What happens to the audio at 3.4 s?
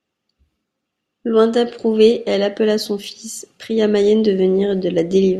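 Nothing goes wrong at 3.4 s; the speech carries on intact through that moment, with no dropout, click or distortion.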